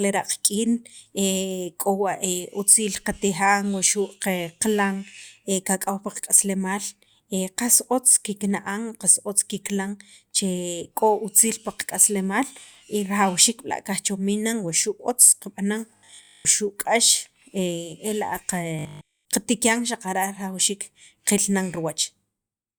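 Speech, with robotic sound from repeated short buffers in two places. From 15.97 to 16.47 s, most of the sound turns into a rigid, metallic buzz at 50 Hz. From 18.79 to 19.29 s, the whole stretch buzzes the same way. The likely cause is audio arriving too seldom, so the player loops the last chunk instead. A 50 Hz buzz fits a repeated 20 ms buffer, while the real audio in between is lost.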